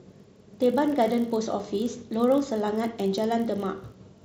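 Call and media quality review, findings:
Buzz at 50 Hz under the speech, present throughout. Level tracks the speech, so it swells on louder passages. Probable component: a filter stage restarted on every block. Each 20 ms block starts from zero state, leaving a small transient at every block boundary.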